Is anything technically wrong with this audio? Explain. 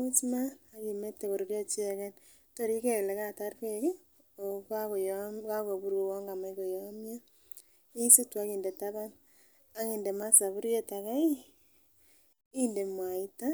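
No, nothing technically wrong can be heard in this speech recording; the signal stays stable and intact throughout.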